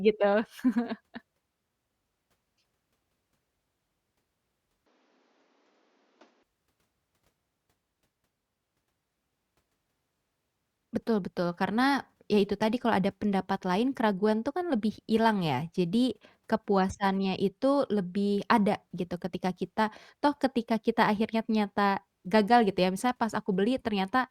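From 4.86 to 6.43 s the input likely switched to a poorer device. The speech loses everything above 7.4 kHz, drops a few decibels, and picks up faint new background noise.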